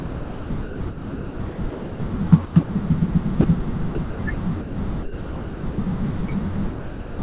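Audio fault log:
0.0–2.0 s, 2.45–2.69 s, 3.95–4.76 s, 5.03–5.78 s: sound chopped by the voice detector. Within each stretch, pieces of speech flick in and out of comfort noise (about 1.58 s, 150 ms, 300 ms and 660 ms replaced), likely from repeated detector switching.
3.41–3.44 s, 6.71–7.19 s: sound dropped by the voice detector. Speech gives way once to steady comfort noise (30 ms, then 480 ms) and does not return until the detector fires again, likely because quiet speech was taken for background. This is one clean gap, not the flickering of chopping.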